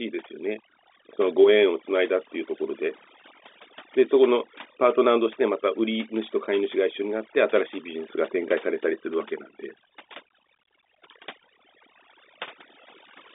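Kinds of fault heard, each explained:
Overdone noise removal: A noise reducer set too strong mutes bands near its noise estimate throughout. Gaps sink to twinkling near-silence, and quiet parts of the speech go with them.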